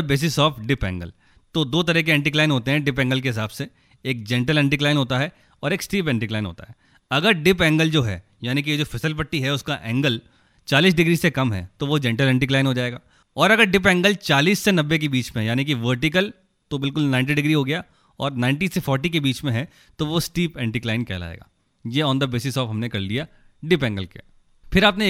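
Nothing goes wrong anywhere in this bit of speech, so there's no fault to point out at any moment.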